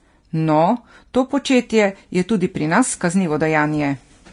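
Throughout the speech, smeared low-bitrate coding artefacts persist. This is likely low-bitrate audio saved at a high bitrate, consistent with a Vorbis source near 33 kbit/s re-encoded as MP3 around 256 kbit/s.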